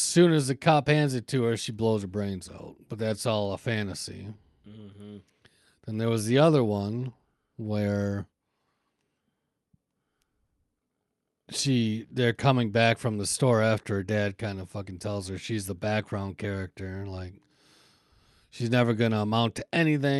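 At about 10.45 s there's a short stall from a late packet: the jitter buffer ran dry, so the receiver stretched the last bit of sound for roughly 50 ms until the packet turned up. Nothing's lost, but that moment drags as a held sound.

Then from 13.64 to 14.07 s, between "back from the store" and "kind of fucking tells", you get a jitter buffer speed-up. The buffer was running long, so it trimmed pitch-period slices, around 50 ms in total, making the speech about 9% faster with the pitch unchanged, rushed.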